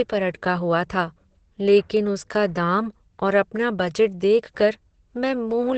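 Opus compression is likely behind the damage heard throughout this speech, from start to finish. The sound is muffled and hoarse, with nothing above about 8.7 kHz, and the damage is heavy. That dulled, rasping character points to the encoder running in its speech-oriented SILK mode at wideband. It fits a very low rate, around 12 kbps, where too few bits remain to carry the upper spectrum or fine detail in the voice.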